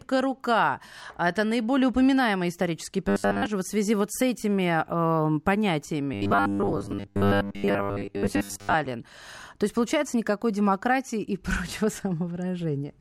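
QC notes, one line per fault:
3.09–3.46 s and 6.14–8.74 s, robotic sound from repeated short buffers: the speech turns into a stiff, metallic buzz at a fixed 100 Hz that still roughly tracks the syllables. This is likely from audio arriving too seldom, with a 10 ms chunk looped to fill most of each gap while the real signal is dropped. On a spectrogram, flat harmonic lines appear at 100 Hz spacing. The waveform shows identical 10 ms cycles repeating.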